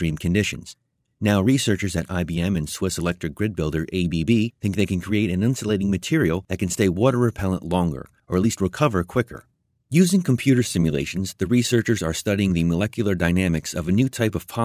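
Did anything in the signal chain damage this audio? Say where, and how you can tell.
No, nothing in this speech recording stood out on listening as damage from any stage of the signal chain.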